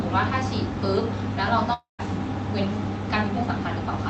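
From 1.73 to 2.01 s the sound smears into a fading buzz, then about 140 ms of silence, likely a long network dropout, losing roughly a quarter second outright, unlike brief concealed glitches.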